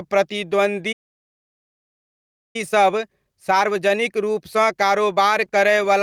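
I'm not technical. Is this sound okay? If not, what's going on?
No, it has three problems.

Throughout the clip there's gain pumping. The level keeps breathing. Everything sits at a flattened, squashed level. That's likely the recording gain set too high for the mic, with an automatic limiter constantly grabbing it back down on each loud moment.

At 0.92 seconds there's a playback stall. The speech cuts out mid-flow and stays silent for about 1.6 seconds, until 2.56 seconds, when it picks up again. It sounds like the audio simply froze, likely because the player ran short of data or got held up and had nothing to play until it recovered.

Right after the stall, from 2.56 to 5.56 seconds, you get time-compressed catch-up. For those three seconds the speech runs about 1.1 times faster than normal, so it feels slightly rushed, but the pitch stays the same and voices don't sound chipmunky. 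The player is trimming out tiny slices and blending the joins to make up the lost time.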